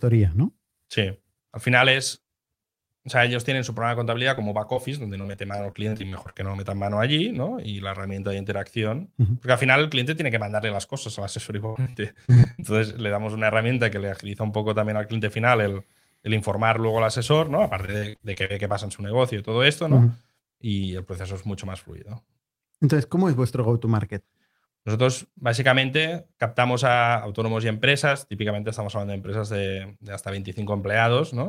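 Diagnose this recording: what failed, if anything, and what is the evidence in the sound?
The network failed, with short concealed packet loss at 4.35–4.39 s and 4.73–4.77 s. About 20 ms of audio went missing each time, and the receiver's concealment bridged each hole by extending the preceding sound before fading back into real signal. Each event is heard as a tiny smear or wobble in the speech. On a spectrogram, harmonics run unnaturally flat for a few hundredths of a second. The waveform shows a repeated cycle where fresh detail should be.

Repeated packet loss (robotic sound) follows from the same network fault in three stretches: 5.21–6.60 s, 11.66–12.63 s and 17.85–18.51 s. Losses arrived in clusters: 12, 10 and 6 holes. The worst stretch, at 11.66 s, has 37% of its span concealed and one gap of 91 ms. Patches pile up faster than real audio can re-establish itself, so speech turns choppy. 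The spectrogram shows comb-like, frozen harmonic blocks alternating with normal texture. The waveform shows periodic copies repeated across the voiced gaps.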